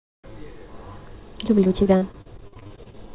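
From 1.64 to 3.11 s, repeated packet loss (robotic sound) repeatedly patches dropouts up to 46 ms long by extending prior sound. About a quarter of the span is concealed, leaving choppy speech with pieces missing.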